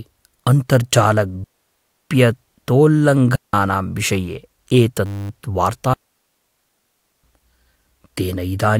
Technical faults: digital wireless dropout; system hang loop

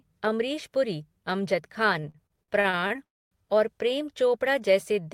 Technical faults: repeated stalls (stutter); call audio freeze

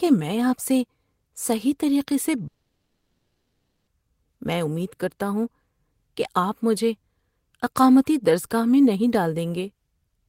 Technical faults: long network dropout

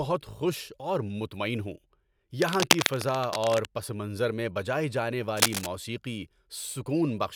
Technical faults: cable scratch noise

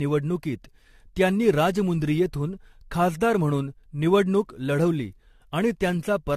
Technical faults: generation loss

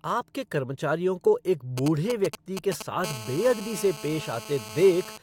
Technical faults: GSM signalling bursts; GSM phone buzz

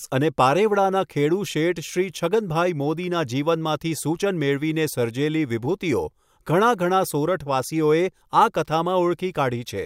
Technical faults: none

